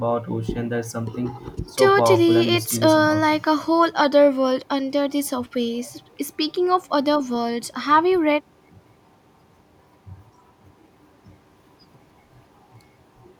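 Speech recording with no audible technical fault: no dropouts, clipping, glitches or level problems.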